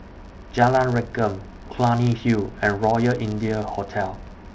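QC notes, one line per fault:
throughout: filter restarted on every block. There's a 100 Hz buzz riding under the speech, which points to 10 ms blocks. The filter keeps starting each block from silence, so every block boundary gets a tiny transient, and the buzz swells and fades with the speech level.
3.48 s: DC step. The waveform's zero line jumps suddenly, so you get a short low thump while the speech carries on untouched. The offset doesn't stay put. It drains away through what sounds like a 20 Hz high-pass, so the thump is brief.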